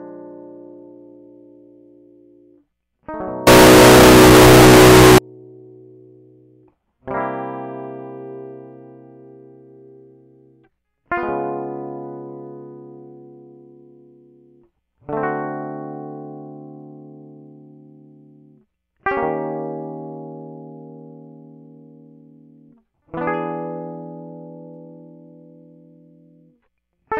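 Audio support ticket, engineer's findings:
3.47–5.18 s: music turns loud, harsh, near-square at a near-fixed high level; likely float read as integer (32-bit float taken as 32-bit integer). Unlike clipping, the level is fixed and pitch stays traceable.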